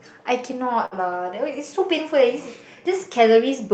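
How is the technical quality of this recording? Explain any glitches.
The recording has one glitch: a brief stall early in the speech. The audio also comes through a call codec, heard as band-limiting with nothing above about 8 kHz and the usual coding noise of a low-bitrate call codec.

Short stall from a late packet, 0.85 to 0.94 s: a packet arrived late, so the jitter buffer ran dry. The receiver stretched the last sound by about 60 ms while waiting, then resumed where it left off. Nothing is lost. The speech just lags by 60 ms from that point, and the held sound is briefly drawn out with a slight buzz or dip.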